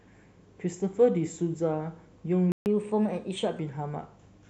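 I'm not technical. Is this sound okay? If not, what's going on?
No. At 2.52 s the speech stops dead for about 0.14 s, a playback stall, likely because the player briefly ran out of data. Unlike a dropout, where a piece of sound is simply lost, the speech here picks up exactly where it paused.

Right after, from 2.66 to 3.59 s, comes catch-up at higher speed. The player rushes through the delayed audio at 1.15 times normal speed, so the voice runs faster and sits roughly two semitones higher, then settles back to normal. Speed and pitch rise together, which sets it apart from a plain pitch change.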